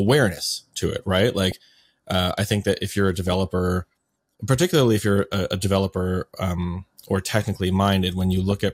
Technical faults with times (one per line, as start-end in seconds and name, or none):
1.52-1.66 DAB burbling
3.27-3.50 DAB burbling
8.51 DAB burbling